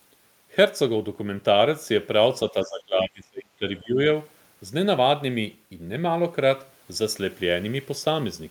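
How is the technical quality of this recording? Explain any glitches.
The recording has one glitch, speech suppressed in double talk, between 2.51 and 3.98 s. The voice dips over about a second of that span, falling by around 25 dB at its deepest. The likely cause is an echo canceller that heard both sides talking at once, could not tell the near talker from loudspeaker echo, and turned everything down. On a waveform the envelope shrinks. A spectrogram shows energy thinning and fading across that window.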